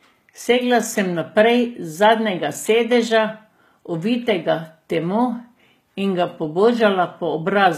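Speech runs the whole way through with a top end that stops short: there is nothing above about 14.9 kHz. That points to low-bitrate audio saved at a high bitrate, likely a very low-rate HE-AAC encoding, on the order of 20 kbit/s, later re-encoded as MP3 at something near 192 kbit/s. The generous second pass cannot restore what the first one discarded.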